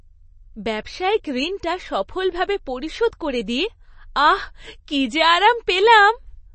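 Throughout the speech the sound is watery and swirly, sibilants chirp metallically, and nothing reaches above 8.3 kHz. This is likely MP3 compression at a starved bitrate, which fits about 32 kbps: the encoder cuts the treble and drops weak frequency lines frame by frame.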